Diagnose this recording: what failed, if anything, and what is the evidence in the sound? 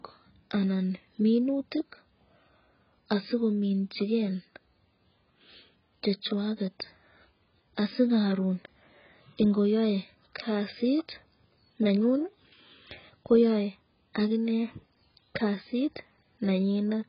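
The codec stage failed: the speech was likely squeezed through AAC compression at a very low bitrate, and the damage is heavy and runs the whole length of the recording. Nothing survives above about 5.3 kHz, so consonants lose their air and the voice sounds dull and boxed in. That low cut-off and the smeared, warbling texture on sibilants and sustained vowels point to a bitrate around 12 kbps.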